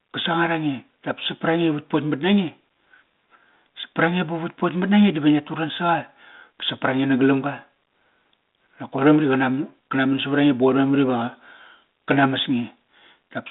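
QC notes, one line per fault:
Nothing to flag here, just speech carried over a 32 kbit/s G.726 phone link with its narrow band of about 200 Hz to 3.7 kHz and a light layer of coding texture.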